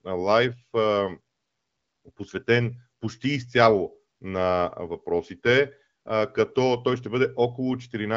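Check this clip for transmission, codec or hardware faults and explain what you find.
Nothing faulty turns up anywhere in this speech recording. It comes over an AMR wideband (HD Voice) link whose clear, lightly coded character fits the 15.85 kbit/s mode, with nothing above about 7.6 kHz.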